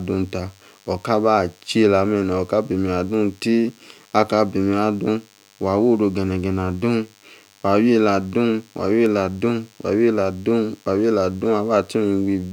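A thin, steady buzz with a 100 Hz fundamental and many harmonics runs under the speech throughout, faint at about 35 dB below it. This is DECT cordless phone buzz: a nearby DECT device's 100-per-second radio bursts are rectified by the audio circuitry.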